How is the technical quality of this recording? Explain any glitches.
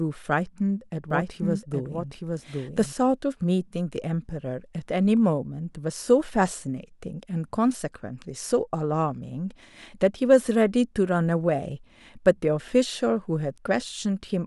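The recording has one glitch, a doubled audio track between 1.11 and 2.93 s. The speech is joined by a second, clean copy trailing around 0.7 s behind and roughly 5 dB quieter, with no reverb tail, cutting in and out abruptly. The likely cause is the same signal being mixed in twice, either picked up again through a slower route or left as an out-of-step duplicate during editing.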